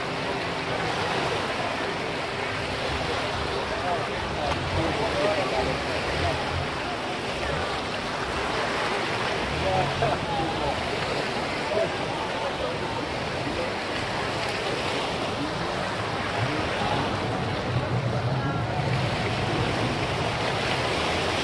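No technical faults are audible.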